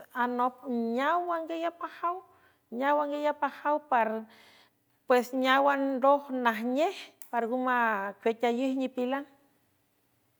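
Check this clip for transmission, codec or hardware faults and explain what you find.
No transmission, codec or hardware faults turn up in this speech clip.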